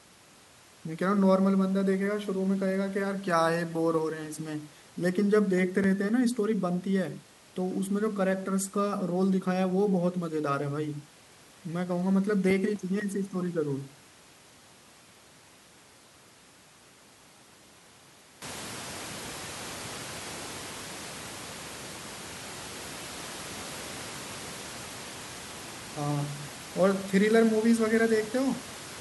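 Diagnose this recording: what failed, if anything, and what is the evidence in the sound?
CD scratch ticks, playback stage: seven brief, evenly spaced ticks at 5.33–6.85 s and again at 12.0–13.52 s, one per disc revolution, where uncorrectable samples are concealed.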